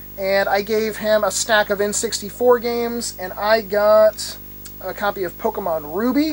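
A video or display buzz runs through the whole recording, sitting roughly 20 dB below the wanted sound. A screen or its cable is coupling interference into the audio path, giving a 50 Hz buzz at the picture's field rate with raspy hash above it, plus a very high whine at 15.6 kHz from the line scan. A spectrogram would show a low comb of harmonics on 50 Hz spacing and a steady thin line at 15.6 kHz.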